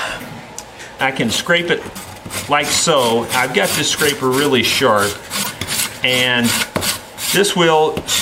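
A corrupt frame decoded at 5.43 to 5.47 s gives a short, loud chirp, blip or burst of noise lasting about 40 ms, the span of what sounds like a single damaged frame. Flipped bits inside the compressed data led the decoder to misread gains and spectral codes, and it played the frame anyway, placing energy at frequencies that do not belong to the surrounding sound. The resulting error peaks at around -5 dBFS.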